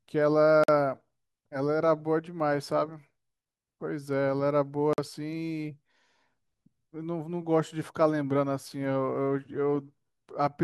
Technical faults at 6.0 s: none

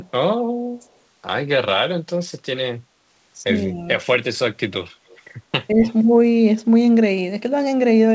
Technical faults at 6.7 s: none

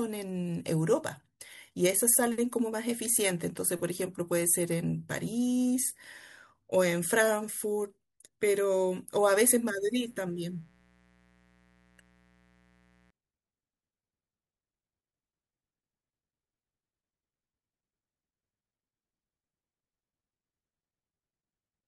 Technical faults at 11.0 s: mains buzz

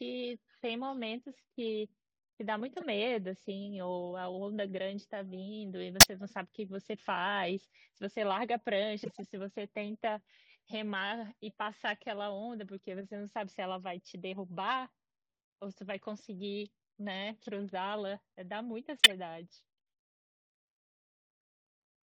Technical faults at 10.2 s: none

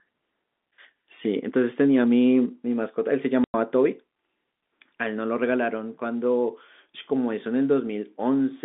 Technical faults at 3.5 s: packet loss filled with silence

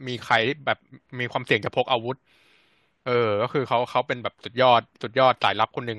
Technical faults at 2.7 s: none

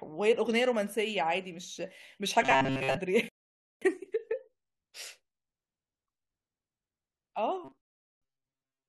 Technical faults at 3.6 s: rebuffering stall

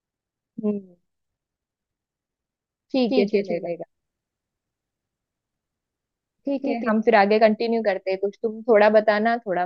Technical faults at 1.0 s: none

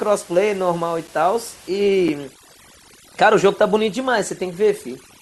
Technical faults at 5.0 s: overdone noise removal

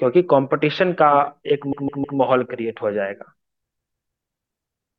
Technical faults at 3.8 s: repeated frames

